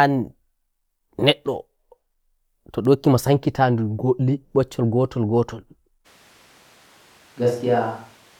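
At 6.07 s the sound turns abruptly roomy and hollow, with thinner bass, and stays that way to the end. The level holds roughly steady, but a background noise floor appears, around 30 dB below the speech. The likely cause is a switch to a distant microphone after the close one dropped out. On a spectrogram, low frequencies weaken and smeared reverberant tails fill the gaps. The waveform's pauses no longer fall to near-silence.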